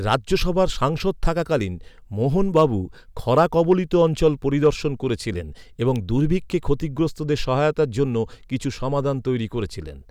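Hard clipping hits this speech recording at 2.57–2.65 s (just after "সাংসদ থাকাকালীন মোহন"), 3.38–3.73 s and 4.66 s (just before "করেছিলেন এবং দুর্ভিক্ষে ক্ষতিগ্রস্তদের"). The peaks run about 2 to 3 dB past what the chain can pass, so their tops are sliced flat, adding high harmonics heard as brief crackle. An electrical switching spike lands at 5.96 s, between "করেছিলেন এবং" and "দুর্ভিক্ষে ক্ষতিগ্রস্তদের সহায়তার জন্য". It is a sharp snap laid over the audio, likely an arc from a nearby switch or discharge picked up by the line.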